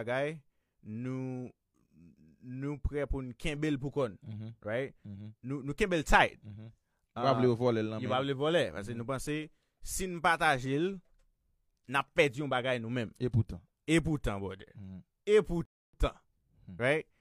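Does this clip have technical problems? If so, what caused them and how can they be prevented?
Yes: a rebuffering stall at 15.65 to 15.93 s halts the speech for 280 ms when the player's buffer runs dry. Unlike a dropout, nothing is skipped; it resumes exactly where it stopped. A larger playback buffer or adaptive bitrate switching would prevent it.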